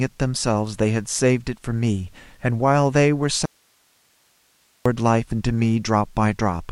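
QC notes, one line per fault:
3.46–4.86 s, audio dropout to a faint residue: the signal feed was likely interrupted while the path after the break stayed live. The speech cuts off abruptly for about 1.4 s, leaving only hiss roughly 40 dB below speech level, then snaps back.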